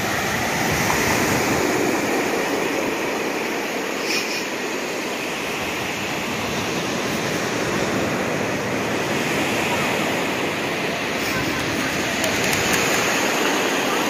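A second path likely captured the same signal and mixed it back in late, producing a doubled audio track from start to finish. Every sound is followed by an identical full-band copy roughly a fifth of a second behind and only about 5 dB quieter. Because the copy carries no decay or room colour, it reads as a distinct, clean repeat rather than reverb, smearing transients into a stuttering double attack.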